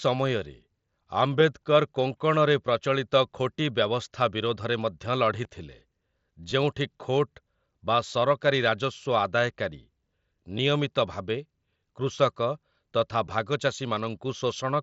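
Concealed Bluetooth headset packet loss occurs at 5.44, 6.51, 10.58 and 13.26 s, each a brief gap of about 7.5 ms, consistent with a single lost packet. The receiver patched each gap by repeating the best-matching slice of recent waveform, so each event is almost inaudible. The mSBC link adds a light graininess on loud sounds.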